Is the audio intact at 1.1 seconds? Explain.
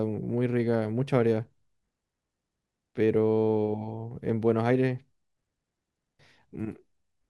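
Yes, at 1.1 seconds the speech runs through cleanly, with no dropout, click, distortion or other disturbance at that moment.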